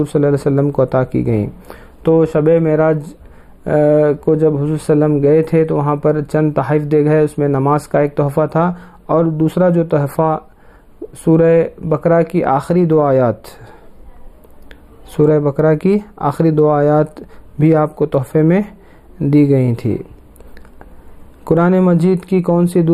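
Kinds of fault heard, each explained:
Channel delay (comb filtering): one side runs just a few samples late, well under a millisecond, so the mono sum notches out around 7 kHz and sounds hollow or phasey.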